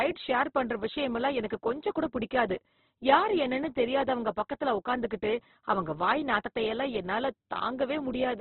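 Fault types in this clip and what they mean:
Opus compression: the speech sounds rough and grainy throughout, with nothing above 4.1 kHz, likely from Opus in its music mode at a low bitrate near 12 kbps. Bands are filled with noise rather than left empty, so it grates instead of swirling like MP3.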